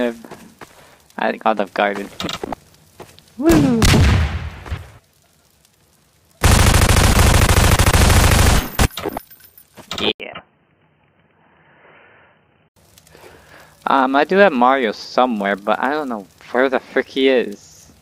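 The input likely switched to a poorer device from 10.12 to 12.76 s: after an 80 ms gap, the sound goes dull, cut above 3.1 kHz, slightly quieter and faintly noisier.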